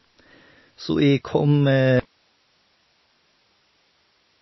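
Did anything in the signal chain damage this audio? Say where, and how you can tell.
Yes. Codec stage: throughout there's nothing above 5.8 kHz and a watery swirl, likely MP3 compression at a low bitrate around 24 kbps starving the high bands.

Then at 2.00 s the speech cuts abruptly to hiss about 45 dB down and never returns, an audio dropout to a faint residue, likely the feed lost upstream while the path stayed live.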